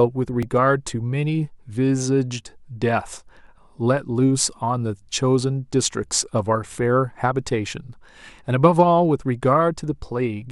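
At 0.43 s there is a repeated buffer: fresh audio arrived late, so the same tiny slice played three times in a row. The repeat length fits a 64-sample buffer of about 1.5 ms, giving a brief buzzy click rather than a stutter. Unlike a dropout, nothing is cut out.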